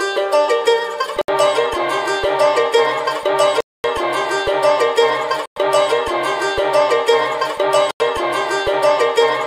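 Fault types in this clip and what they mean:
Bluetooth stall: The audio drops to dead silence four times, at about 1.21 s for 70 ms, 3.61 s for 240 ms, 5.46 s for 110 ms and 7.91 s for 90 ms, with the sound simply stopping and then carrying on. The likely cause is radio interference delaying packets, so the headphones' buffer empties and playback pauses until the resent data shows up. The longest gap is the one around 3.6 s.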